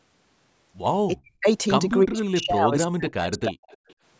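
From 1.11 to 1.47 s and again from 2.05 to 3.58 s the speech sinks by roughly 40 dB, likely speech suppressed in double talk as the echo canceller ducks everything while the far side talks. At 3.70 to 3.94 s there's a faint echo leak, a copy arriving 334 ms late at about 30 dB under the speech.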